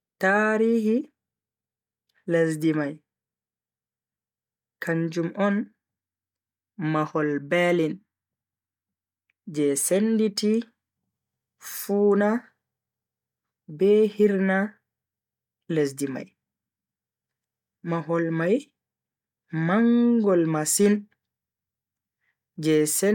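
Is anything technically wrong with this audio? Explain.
No, the speech signal carries no audible technical faults.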